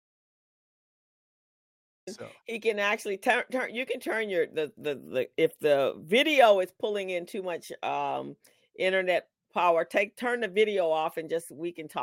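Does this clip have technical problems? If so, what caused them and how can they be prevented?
Yes. An audio dropout to silence is already under way when the clip starts and lasts until 2.07 s, when speech comes in mid-flow. The gap is silent with no room tone: a dead-flat waveform and a blank spectrogram. The likely cause is lost input, such as an unplugged device, a failed link or a stray mute, while recording continued. Securing connections and watching input meters before and during recording prevents it.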